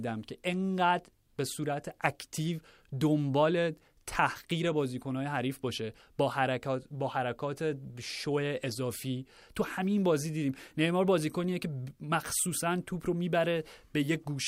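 Speech, with no technical faults audible at any point.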